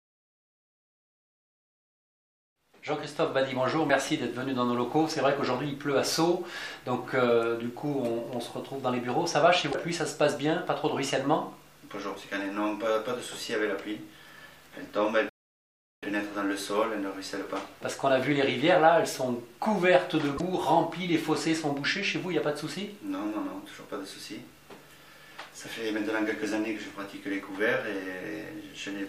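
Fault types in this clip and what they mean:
Damaged data in a compressed stream: bytes in the encoded file or stream were lost or corrupted, so the decoder misread the frames at those points, lost sync and had to hunt for the next valid frame header. Each instance lasts about 70 ms and comes through as a brief chirp or blip that breaks the flow of the audio, first at 9.68 seconds and again at 20.34 seconds.
Playback stall: the player likely ran short of data or had its processing thread blocked, so nothing reached the output until it recovered. The sound cuts off abruptly in mid-flow at 15.29 seconds and the output stays silent for about 0.73 s before the audio resumes at 16.03 seconds. The gap is long enough to register as a clear interruption rather than a click.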